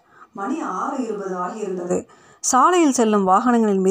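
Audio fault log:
0.37–1.89 s, switch to a distant microphone: the speech turns abruptly roomy and hollow, thinner in the bass and about 10 dB quieter, with room noise rising to roughly 35 dB below the speech. This likely comes from the close microphone dropping out, leaving a farther pickup until it returns.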